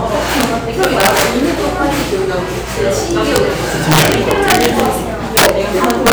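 A recording of everyday sounds with integer overflow. Loud peaks wrap to the opposite sign instead of limiting, giving violent cracks. They occur at 0.41–0.44, 0.83–1.22, 3.36, 3.92–4.86 and 5.85–6.12 s, overdriven by about 1 to 4 dB. The worst is 5.37–5.49 s, at about 19 dB.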